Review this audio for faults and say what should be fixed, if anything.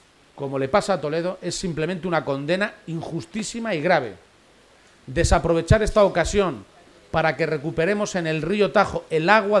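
There are no faults in this audio, so nothing needs to be fixed.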